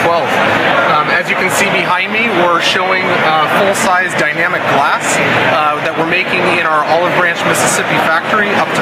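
Gain pumping runs throughout: the level dips under each loud sound and swells back in the gaps, swinging by about 5 dB. The likely cause is gain set far too high, with a fast limiter pulling it down. The waveform looks squashed, its envelope repeatedly sagging and recovering.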